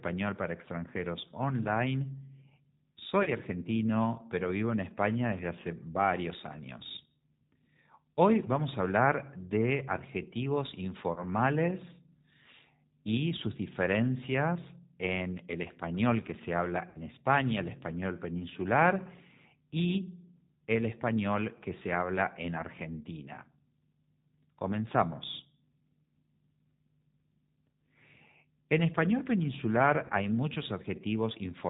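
It's a speech clip squeezed through the G.729 codec the whole way, which fits its usual 8 kbit/s. Everything above 4 kHz is gone, and the voice comes out a bit rough and synthetic because it's rebuilt from a pitch predictor and a few pulses per frame. On top of that there's VoIP packet loss concealed by the speech codec at 3.23–3.31 s (right before "argentino pero vivo en"), 11.13–11.23 s, 16.89–16.99 s (just after "español que se habla") and 30.07–30.12 s (after "español peninsular"). Each time the decoder stretches the last sound into a fading buzzy tone or coloured noise and takes a moment to recover. The gaps are about 30 ms each, which fits a single lost packet, except the 16.9 s one, which is 60 ms and sounds like two.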